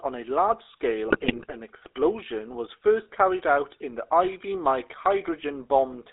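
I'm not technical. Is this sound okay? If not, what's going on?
No. The whole clip has passed through the GSM full-rate codec, the coding used on early mobile phone calls. It squeezes speech into a rough model of the voice, so everything sounds buzzy and gravelly, and the top end is cut off, giving a thin, muffled quality.

From 1.08 to 1.55 s, between "on a large" and "explosion was first carried", GSM bit errors hit the decoder. Corrupted data makes it rebuild the voice wrongly, so that stretch breaks up into squawks, pops and a gargling sound, like a call on a weak signal.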